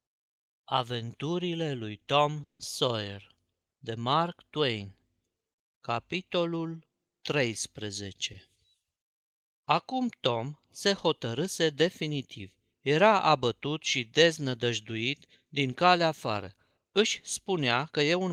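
At 2.43 to 2.61 s the speech stops and a short fading fill drops to silence, then resumes intact. This is a call audio freeze, likely from late packets emptying the jitter buffer and adding about 160 ms of delay. Right after "abătut și deznădăjduit din", from 15.86 to 17.01 s and again from 17.50 to 18.29 s, the speech sounds hurried at unchanged pitch, running at 107% speed. This jitter buffer speed-up trimmed roughly a tenth of a second, then somewhat less, to cut the buffered delay.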